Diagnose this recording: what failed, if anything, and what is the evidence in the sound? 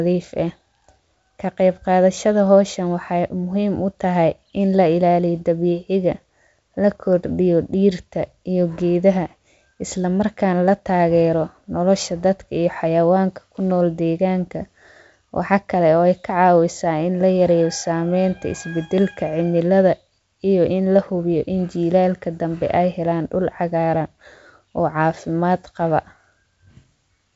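Nothing stood out on listening to this speech recording, which sounds like ordinary G.722 wideband telephone audio at 64 kbit/s with content reaching up to about 7.7 kHz.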